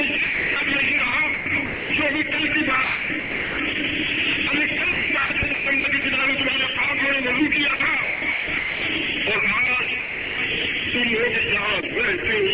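The audio passed through a call path that stops at 4 kHz. From 0.24 to 0.56 s and again at 0.98 to 1.0 s, the sound gives way to steady synthetic noise, likely sound dropped by the voice detector after it mistook the sound for background. At 1.34 to 1.9 s, 2.84 to 3.58 s, 4.92 to 6.04 s, 7.76 to 8.82 s and 9.66 to 10.38 s, the sound turns choppy, with two or more holes. This is likely sound chopped by the voice detector, which repeatedly gated transmission so that comfort noise filled the gaps.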